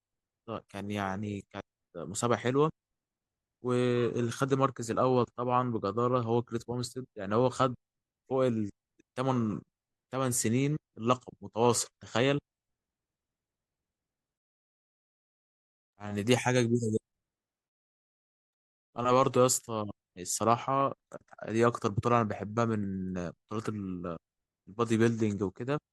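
No technical faults can be heard anywhere in this recording, so there is nothing to describe in time order.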